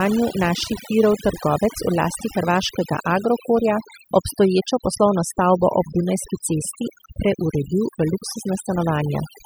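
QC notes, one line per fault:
Throughout: overdone noise removal. The noise reduction stage was driven too hard, so any frequency band whose level sat close to its noise estimate was pulled far down or switched off entirely, and the softer parts of the speech fell below that line along with the noise. What remains of the background has dropped and breaks up into twinkling specks, and the voice comes through missing its quieter detail.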